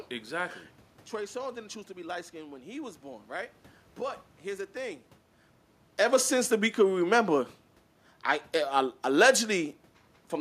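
A speech recording with no technical fault anywhere in it. The room's background noise is audible throughout, and the level shifts near the start and again around five and a half seconds come from the talker moving relative to the microphone, not from the system.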